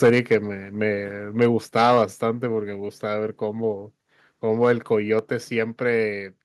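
Microphone overload crackles harshly on peaks from 0.03 to 0.36 s, about 6 dB over. That's likely input gain set too high. At 0.1 s the microphone volume steps down about 2 dB, likely the call software reacting. Overload returns at 1.41 to 1.46 s and 1.76 to 2.02 s, the latter about 7 dB over. Level drops about 4 dB at 2.13 s. Overload hits again at 4.63 to 4.72 s, then another step down of about 3 dB follows at 5.19 s.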